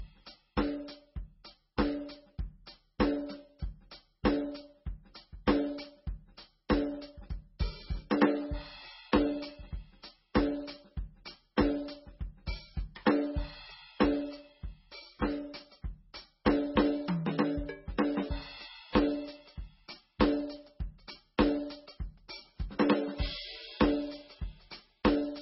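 From start to end, the music has nothing above 5.6 kHz. The top of the spectrum is simply gone, so the music sounds dull and boxed in. The sound also has the smeared, watery texture of heavy MP3 coding. This is likely low-bitrate audio saved at a high bitrate. The damage fits an MP3 at around 16 kbit/s, later re-encoded at a much higher rate. That second pass adds size, not detail. The lost band never returns.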